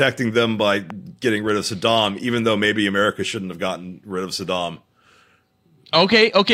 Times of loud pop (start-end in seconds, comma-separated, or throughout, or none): 0.90-0.92